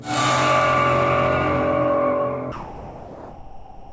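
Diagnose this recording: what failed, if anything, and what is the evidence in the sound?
Call processing stage: from 2.52 s to the end, the sound gives way to steady, featureless noise, likely sound dropped by the voice detector, with comfort noise filling the gap. On a spectrogram, detail gives way to a flat, uniform noise floor.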